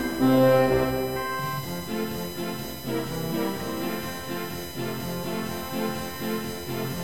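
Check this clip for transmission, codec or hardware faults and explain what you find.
One hardware fault is present: USB whine runs through the whole music clip. It is a fixed-pitch tone built on 1 kHz and its harmonics, with the strongest component high up at 13 kHz, sitting about 15 dB below the music. The cause is the USB bus drawing current in bursts once per 1 ms frame. That rhythmic load leaks into the audio path through shared power or ground, so it is heard as a thin, steady, high whine.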